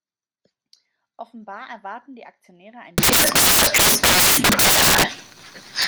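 From 2.98 s to the end, the speech collapses into loud, harsh broadband noise: samples built from the wrong bytes. Each sample's bytes are combined in the wrong order or alignment, so the rapidly varying low bits dominate every value.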